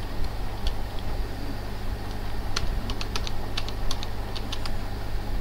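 Nothing stood out on listening to this audio.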